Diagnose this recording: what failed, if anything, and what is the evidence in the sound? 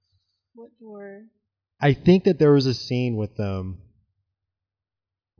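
Listening through the speech, nothing stood out at any stage of the chain that would point to a failure.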